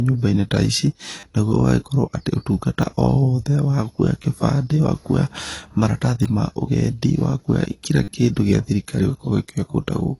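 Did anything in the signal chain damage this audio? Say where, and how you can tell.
Yes. A lossy codec stage, likely AAC-LC at a low bitrate around 32 kbps, leaves nothing above 11.5 kHz, so the speech sounds dull and smeared with warbling sibilants.

At the buffer stage, repeated buffers stutter at 1.20–1.23, 2.82 (after "atĩ ũtungata"), 4.22–4.24, 6.23–6.25 and 8.04–8.08 s. Each stutter is a 10 ms chunk replayed with hard joins.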